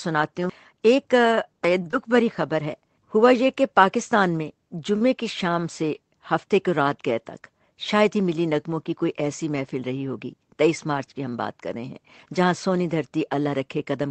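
At 1.82 s the speech holds a sound about 35 ms too long. This is a short stall from a late packet: the jitter buffer ran dry and the receiver stretched the last sound until the packet arrived. Right after, at 1.91 s, a brief smear lasting about 17 ms marks short concealed packet loss. Audio never reached the decoder in time, so the receiver extended what came before and blended back in. At 4.96 s a second late-packet stall holds a sound for about 43 ms before resuming at the same point. From 13.44 to 14.03 s the speech sounds hurried at about 110% speed with unchanged pitch. This is a jitter buffer speed-up, where around 70 ms of pitch-period slices were trimmed to cut excess delay. Across the whole clip the call path's band limit sits at 8 kHz, which fits Opus running at a modest bitrate.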